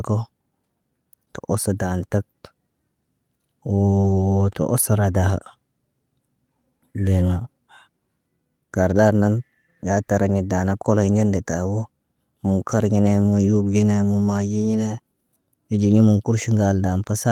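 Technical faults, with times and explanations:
4.01 to 4.05 s, short concealed packet loss: a brief smear in the sound, where about 20 ms never arrived in time and the receiver filled the hole by extending the preceding sound's pitch or noise before blending back into the real audio.
4.03 to 4.05 s, lost packet rebuilt from error correction: a rough, noisier 20 ms stretch with no gap, which points to a single lost packet whose low-bitrate copy, carried in the following packet, was decoded in its place.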